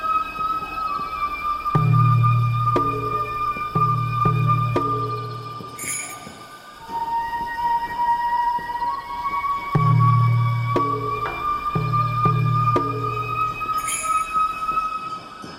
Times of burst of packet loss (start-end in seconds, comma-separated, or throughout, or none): none